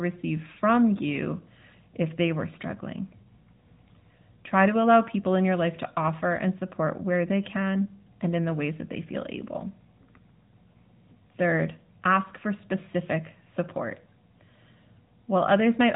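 From start to finish, the speech carries AMR narrowband mobile codec damage. Nothing above 3.8 kHz survives, so the sound is dull and boxed in. The codec models the voice from sparse pulses at a reduced bitrate, which fits about 10 kbps. The result is a plainly audible buzzy, synthetic edge.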